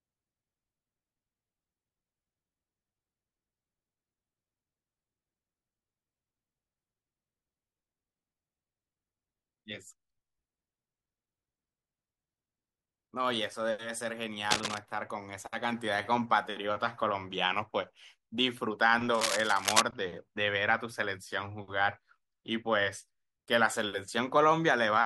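Speech, with two short bursts of cable scratch noise: a crackly, rustling patch from 14.51 to 14.78 s, and a longer one from 19.14 to 19.82 s. Both sit roughly as loud as the talking itself. The uneven, gritty texture likely comes from a worn cable, connector or pot being nudged, with the contact resistance jumping around and spraying noise over the signal for a moment.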